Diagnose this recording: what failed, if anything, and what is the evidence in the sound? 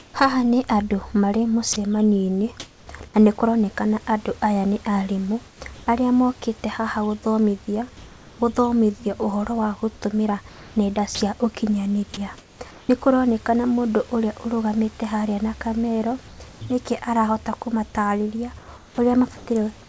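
Comfort noise in place of the background at 0.0–2.87 s, 5.48–5.87 s (between "kũronekana aya nĩ arimũ" and "arĩa mokĩte haha"), 7.97–8.39 s (about 1 dB quieter), 10.49–12.89 s (after "ũhoro wa gũtũmĩra"), and 16.28–19.46 s (after "ũrũgamĩte harĩa na kamero"). In each gap the room's background becomes a steady, featureless noise. This is a call-processing fault, likely discontinuous transmission, where the receiver synthesises noise while the sender is silent.

Sound dropped by the voice detector at 1.73–1.76 s and 11.15–11.21 s, in 30 ms and 60 ms slices within those gaps. The sound briefly gives way to flat synthetic noise. The likely cause is the sender's voice detector misjudging low-level sound as background and pausing transmission.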